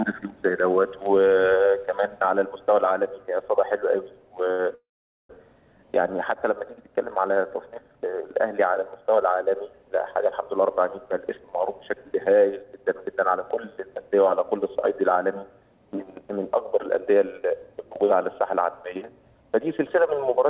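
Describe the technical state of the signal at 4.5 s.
At 4.51 to 4.61 s there is a short stall from a late packet. The jitter buffer ran dry, so the last sound was stretched for about 76 ms and playback resumed without loss, now 76 ms later. On a spectrogram this shows as a smeared, held band below the 4 kHz ceiling of the call path; the waveform shows a repeating, slightly dipped stretch.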